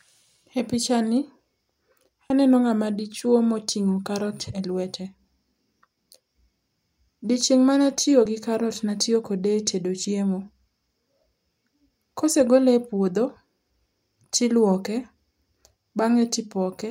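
At 2.30 s, just before "aneno ng'ama dichwo moting'o", and at 8.26 s, right after "ma natiyo", there's audio missing between chunks: a tiny butt-joined skip, likely a roughly 20 ms sliver dropped at 3-second chunk boundaries.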